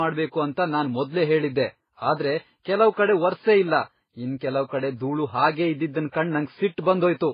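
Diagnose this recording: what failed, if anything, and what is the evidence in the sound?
The failure sits at the codec stage: the speech shows the stacked damage of transcoding between lossy codecs throughout. Nothing is heard above 5 kHz, and the different codecs' artefacts are heard together, which points to a low-bitrate MP3 likely passed through HE-AAC and then Vorbis. A spectrogram would show a hard ceiling at 5 kHz with blocky, patchy energy below it. Each encoder coded the previous one's artefacts as if they were signal.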